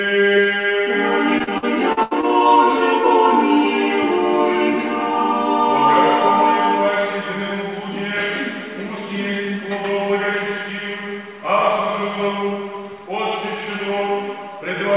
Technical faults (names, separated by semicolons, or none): repeated packet loss (robotic sound)